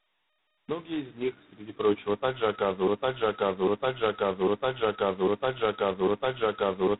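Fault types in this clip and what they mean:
G.726 ADPCM: The whole recording is band-limited to telephone range, with nothing above about 3.9 kHz, and the speech carries a coarse, rasping hiss that rises and falls with the talker's level. That level-tracking grit, rather than the watery or metallic swirl of a transform codec, marks adaptive differential coding. The heavy damage fits the 16 kbit/s mode, where only two bits per sample describe the prediction error.
broken-record loop: From about 2.87 s to the end, a 0.8 s fragment of speech plays again and again, back to back, five times, identical each pass. The likely cause is a stalled player or stream resending its last buffer. The speech that should have filled those seconds is lost. Unlike an echo, the repeats don't decay or overlap, and unlike a brief stutter, the loop runs for seconds.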